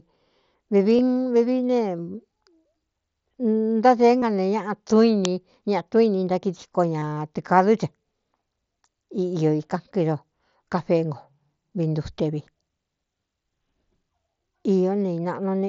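Speech carried over a Bluetooth headset link, with the mSBC codec adding only light graininess on louder sounds, shows concealed Bluetooth headset packet loss at 0.97 s and 4.20–4.22 s. Each is a gap of about 22.5 ms, which fits three lost headset frames, and the receiver papers over it by repeating a matching stretch of the preceding waveform. The third event, from 6.99 to 7.17 s, is heavier: about 105 ms of audio is lost across 180 ms, with the longest unbroken run 37.5 ms. There the repeated cycles build into a brief buzzy, held tone with a slight warble as real audio resumes. At 5.25 s an uninitialised buffer produces a loud crack about 1.45 ms long, consistent with a 64-sample block played out before any audio had been written to it, so stale memory contents were reproduced as samples.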